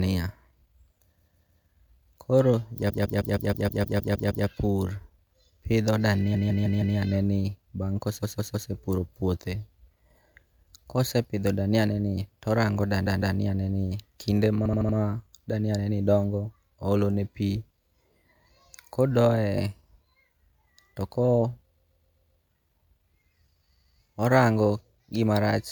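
Repeated frames stutter the speech at 1.19–1.66 s, 2.89–4.46 s, 6.34–6.96 s (before "ne ni bang'"), 8.22–8.69 s (after "ne ni bang'"), 13.05–13.36 s, 14.64–14.96 s, 21.75–22.40 s and 23.74–23.97 s. Blocks of compressed audio replay two to ten extra times, looping 157, 131 or 78 ms chunks and lengthening the clip.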